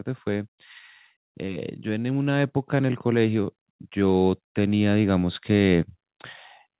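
In this speech recording, both the voice and the background swell steadily louder from 1.46 s to 5.9 s, rising by about 8 dB. This is automatic gain rising: the gain control judged the input too quiet and slowly raised its gain. The audio also stops at 4 kHz, which fits a narrowband G.711-style call codec.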